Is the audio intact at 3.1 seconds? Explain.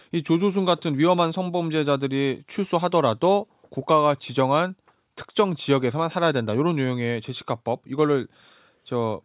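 Yes, the audio is intact at 3.1 seconds, with no fault at that moment.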